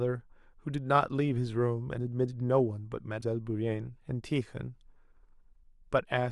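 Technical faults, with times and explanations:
3.18–3.23 s, damaged data in a compressed stream: in the middle of the speech there's a brief burst of garbage, roughly 56 ms, that comes through as a chirp, squawk, click or short hole instead of the voice. Some of the compressed bytes there got lost or corrupted, so the decoder misread those frames, fell out of sync, and had to hunt for the next valid frame header before it could play clean audio again.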